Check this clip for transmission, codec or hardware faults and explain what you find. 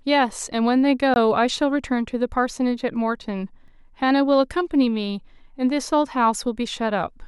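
Two blocks of digital silence break the speech: a 20 ms gap from 1.14 to 1.16 s, heard as a short hole, and a 2.1 ms one at 3.68 s, heard as a tick. The sound cuts out abruptly, probably from an unfilled output buffer. A concealed or faded dropout would sound smoother.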